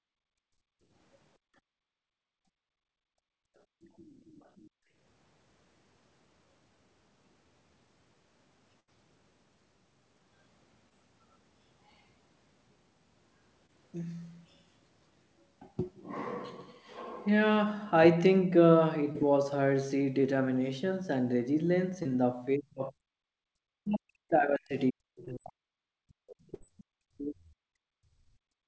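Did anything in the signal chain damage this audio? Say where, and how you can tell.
Yes. Several stages left audible damage.

Background gated by the echo canceller (call processing): at 0.0 to 0.91 s, 1.38 to 3.9 s, 4.72 to 4.89 s and 23.25 to 23.48 s the room tone collapses by about 28 to 34 dB, then snaps back. The floor vanishes abruptly rather than fading with level, which is the echo canceller's suppressor clamping the microphone while the far end plays through the loudspeaker.

Other side's voice leaking through (call processing): from 3.82 to 4.69 s a faint second voice sits under the signal, roughly 35 dB below the main speech. It is quiet and separate from the near talker. It is likely residual loudspeaker echo that the canceller failed to subtract from the microphone path.

Burst of packet loss (network): at 8.80 to 8.89 s and 26.54 to 26.63 s the audio turns into a held, decaying continuation of the preceding sound and then jumps ahead. 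About 80 ms and 60 ms of real audio are missing. The decoder's concealment stretched the last frames and faded them, so each gap shows as a buzz or hiss with a discontinuity after it.

Short concealed packet loss (network): brief smears or wobbles occur at 10.89, 13.66, 19.12, 22.03 and 25.25 s. Each replaces about 20 ms of audio with extrapolated signal before blending back. That duration fits a single lost packet per event. Within the 8 kHz bandwidth of the G.722 path, these show up as tiny pitch or texture glitches rather than clean dropouts.

Speech suppressed in double talk (call processing): from 22.57 to 22.97 s, and again from 23.76 s to the end, the near talker's level dips sharply, by around 35 to 40 dB at its deepest. The talker's own level does not account for this. The likely cause is the echo canceller's nonlinear processor treating simultaneous far-end activity as echo and attenuating the whole microphone signal.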